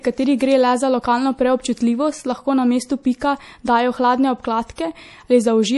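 MP3 compression is audible across the whole speech clip. Nothing comes through above 11.5 kHz, a hard ceiling that points to a low-bitrate encode, which fits something around 48 kbps. With so few bits available, the encoder has likely discarded the treble outright and left weaker frequency components switching in and out between frames. The result is a plainly audible watery, swirling texture, with metallic edges on sibilants and softened consonant onsets.

Pre-echo appears twice, from 3.19 to 3.22 s and from 4.76 to 4.78 s, spreading about 21 ms and 25 ms respectively. In both places a sharp onset lands late in a transform block. The coding noise, scaled to suit the loud attack, is smeared evenly across the block and spills into the quiet moment just before it. Each onset is heralded by a brief hiss and arrives blunted rather than crisp.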